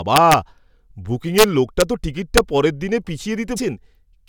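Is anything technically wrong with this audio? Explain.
Yes, there are two problems in this speech clip.

The first is integer overflow, at 0.16 to 0.34 s, 1.38 to 1.44 s, 1.81 s and 2.38 s. On those loud moments the level pushes only about 1 to 3 dB past the top of the integer range. Because nothing limits it, each peak wraps round to the opposite extreme instead of flattening out. You hear harsh, violent cracks, far nastier than ordinary clipping, even though the overshoot is small.

The second is damaged data in a compressed stream, around 3.56 to 3.58 s. A stretch of the encoded data is corrupt there, so the decoder misreads those frames, loses its place and has to hunt for the next valid frame header. That shows up as a short glitch lasting about 20 ms, sitting briefly in the audio before decoding picks up again.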